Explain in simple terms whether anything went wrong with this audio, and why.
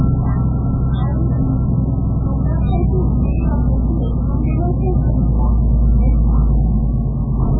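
MP3 compression damage runs through the whole clip, from start to finish, and is heavy. The sound has nothing above about 3.8 kHz, so it comes across dull and boxy, with a watery, swirling texture. This is likely the result of squeezing the audio into very little data. The encoder drops the treble and throws away the quieter details, which then flicker in and out and smear sharp sounds.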